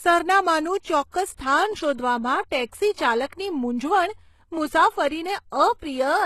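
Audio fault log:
throughout: HE-AAC compression. The treble sounds synthetic and gritty, with nothing above 12.3 kHz, and the upper band is plainly damaged. This likely comes from HE-AAC at a low rate, around 16 kbps, coding only the lower spectrum and regenerating the highs by spectral band replication, so harmonics there no longer match.
1.11 to 1.14 s and 5.79 to 5.82 s: pre-echo. A short hiss, about 33 ms long, leads each sharp onset and softens it. The codec spreads quantisation noise across its whole transform block, so noise sized for the loud attack also fills the quiet gap just before it.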